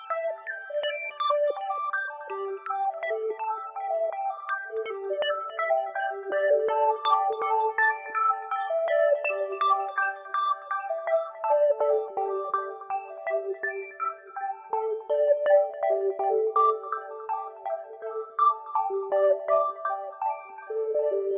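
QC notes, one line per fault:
No faults heard anywhere in this audio.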